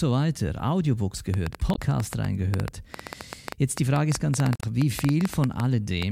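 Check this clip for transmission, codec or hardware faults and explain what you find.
There are two faults in this speech: a long run of clicks and two short bursts of corrupted compressed data.

From 1.34 s to 6.03 s a train of clicks ticks over the speech and pauses, about eight per second at an uneven pace, some forty in all, peaking well above the speech. Each click has much the same shape, so a repeating pulse source is the likely cause, such as electrical interference or a faulty connection or power supply.

At 1.71–1.79 s and 4.54–4.63 s, damaged data in the compressed stream produces brief disruptions. The decoder misreads corrupted frames and hunts for the next valid header. Unlike the clicks, each event is a garbled blip lasting tens of milliseconds.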